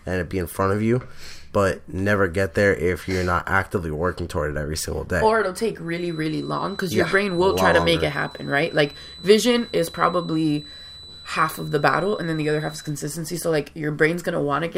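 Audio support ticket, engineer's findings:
Feedback whistle, 5.83 to 12.99 s, after "it'll take", gone before "so like". Thin steady tone at 4 kHz, about 20 dB under the speech, swelling and fading slowly. Likely a speaker-to-mic loop sitting just at the feedback point, not running away.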